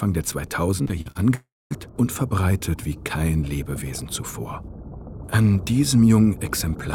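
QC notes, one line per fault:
0.83–1.17 s, repeated packet loss (robotic sound): audio data kept failing to arrive in four short bursts, the longest about 43 ms. Each hole was patched by extending the preceding sound, so about a third of this span is synthetic fill, giving a choppy, robotic texture.
1.35–1.73 s, long network dropout: about 360 ms of audio goes missing. The last sound is stretched into a decaying buzz or hiss, then roughly 230 ms of silence follows before the audio resumes with that portion gone. The cause is likely an interruption of the incoming stream.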